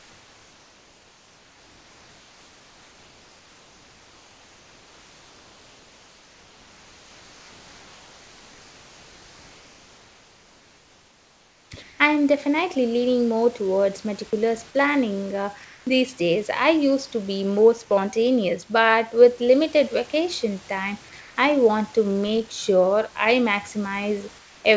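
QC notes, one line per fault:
0.00–11.71 s, comfort noise in place of the background: the room's real background becomes a flat, featureless hiss about 3 dB quieter until "I am definitely leaning", likely because the sender stopped transmitting in the silence.
11.83–11.99, 15.65–15.87, 21.21–21.37 and 24.39–24.65 s, comfort noise in place of the background: short gaps of 160–260 ms where steady synthetic noise replaces the room sound, level unchanged or up to about 3 dB down; one sits between "with limited vacation time" and "I want to make". Likely the same silence suppression.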